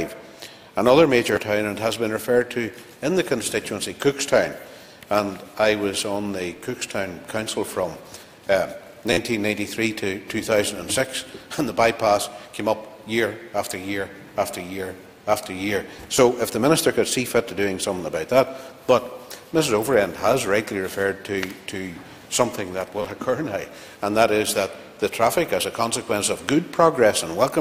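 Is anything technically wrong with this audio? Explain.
Yes. The clip has four instances of a repeated buffer: at 1.36 s, from 9.13 to 9.17 s, at 16.17 s, and from 23.02 to 23.05 s. Fresh audio failed to reach the output in time, so the device replayed its last block of about 11.6 ms, which fits a 512-sample buffer. The sound is therefore repeated in a tiny loop with hard joins. The single repeats at 1.36 s and 16.17 s are a click or brief buzz. The fourfold repeat at 9.13 s becomes a short buzzing stutter.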